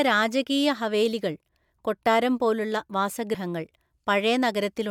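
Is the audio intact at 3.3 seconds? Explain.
No, compressed frames are skipped at 3.34 s. Roughly two whole frames never reach the output, so the audio jumps ahead by about 70 ms, which fits a 32 ms frame length.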